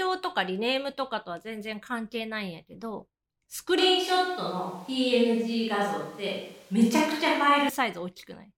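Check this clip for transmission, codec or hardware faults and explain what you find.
One fault stands out in this speech. From 3.78 to 7.69 s, a switch to a distant microphone: the voice turns abruptly roomy and hollow, with thinner bass, while loudness barely changes. It is likely that the close microphone dropped out and a far one took over. The sudden switch at both ends and the added room noise, sitting well below the speech, separate it from a gradual filtering fault.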